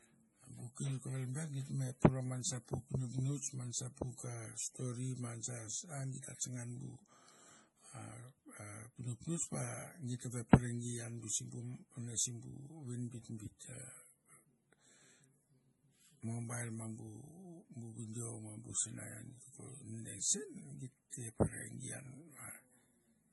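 Throughout the speech, nothing sounds above 11.5 kHz, and the remaining band is watery and swirly, with chirpy s sounds and smeared consonant onsets. This heavy damage is likely MP3 compression at a low rate, which fits roughly 32 kbps, zeroing weak frequency lines.

From 21.10 to 21.12 s, a short hiss runs ahead of a sharp onset for about 25 ms, and the attack sounds softened. This is pre-echo: the codec spread the quantisation noise meant for the loud attack across the quiet moment before it.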